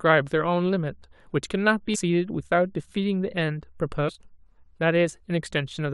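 At 1.94–1.96 s and 4.08–4.10 s, damaged data in the compressed speech stream makes the decoder misread frames and lose sync, producing brief glitches.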